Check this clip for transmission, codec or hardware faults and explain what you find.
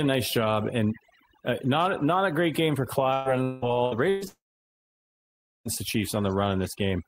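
Three faults are audible: one spans the whole clip, and two network faults follow one another in the later part of the speech.

Overdone noise removal, throughout: the background drops and breaks up into twinkling specks. A noise reducer set too aggressively is switching off individual frequency bands whenever they sit near its noise estimate, taking quieter parts of the voice with them.

Repeated packet loss (robotic sound), from 3.13 to 4.25 s: the speech turns choppy, with pieces missing. Four separate holes, the longest 184 ms, are each patched by extending the preceding sound, so about 0.48 s (43% of this stretch) is synthetic fill.

Long network dropout, from 4.28 to 5.68 s: the last sound trails off briefly as a fading buzz or hiss, then about 1.26 s of silence follows before speech resumes with roughly 1.38 s of content gone. The likely cause is a stall in incoming audio, which the receiver concealed only briefly before giving up.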